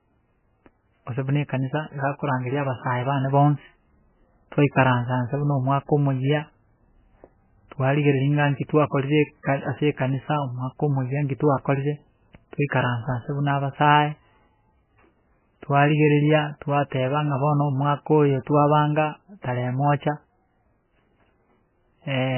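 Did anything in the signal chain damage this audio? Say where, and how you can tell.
Yes, at the codec stage: the speech is damaged throughout by heavy MP3 compression, likely from a starved encoder. Nothing survives above 3 kHz, and the watery, swirling texture of flickering frequency lines, unlike a plain low-pass filter's clean dullness, fits a very low bitrate, around 9 kbps.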